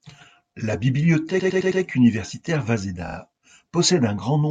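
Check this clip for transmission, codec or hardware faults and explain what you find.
The speech has repeated frames at two points. A run of compressed frames was delivered more than once, so the decoder replayed the same audio: from 1.39 to 1.81 s a 106.7 ms block plays four extra times, and from 3.07 to 3.16 s a 42.7 ms block plays twice more. Both are heard as a stutter, and together they lengthen the speech by about half a second.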